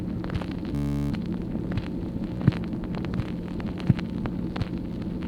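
From 0.75 to 1.12 s, a Bluetooth stutter: packets went missing, the receiver looped its last buffer, then sound resumed 364 ms further on.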